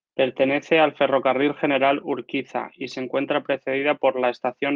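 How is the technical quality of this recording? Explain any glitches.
No technical glitches can be heard anywhere in the recording; the speech signal stays intact and continuous throughout.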